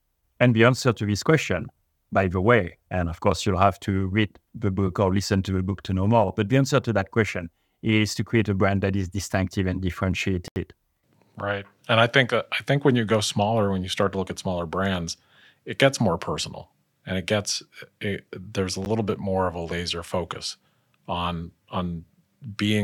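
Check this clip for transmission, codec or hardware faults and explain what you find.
Two blocks of digital silence interrupt the speech, likely from output buffers not filled in time. At 10.48 to 10.56 s, an 80 ms hole appears with hard edges, and at 18.85 s a brief tick. In the waveform each is a flat line near silence, and on the spectrogram a blank vertical gap. The 11.6 ms length of the second fits a 512-sample buffer.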